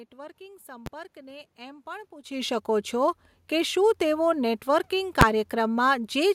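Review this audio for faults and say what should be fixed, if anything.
Invalid numbers at full scale hit at 0.86 s and again at 5.21 s, just after "કે શું તેઓ નેટવર્કિંગ". A calculation went infinite or undefined, pinning the output at maximum level for a block of about 10 ms, so each is heard as a single sharp bang. To prevent this, check processing results for infinite or undefined values and replace them with silence before output.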